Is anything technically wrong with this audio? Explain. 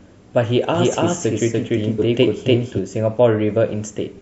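Yes, two faults.

From 0.75 to 2.79 s there is a doubled audio track: a full-band copy about as loud as the original trails it by roughly 300 ms, with no decay or room colouring. The likely cause is a second capture through a slower path. The copy starts and stops abruptly.

Between 1.98 and 2.00 s, compressed frames are skipped. The audio jumps ahead roughly 0.7 s, which points to about fifteen 46.4 ms frames.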